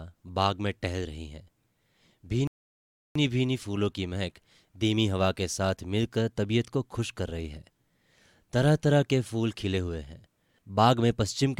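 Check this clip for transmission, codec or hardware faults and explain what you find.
One transmission fault is present. From 2.47 to 3.16 s, a rebuffering stall: the player's buffer emptied, so playback halted, adding about 0.68 s of silence before the speech resumed exactly where it stopped.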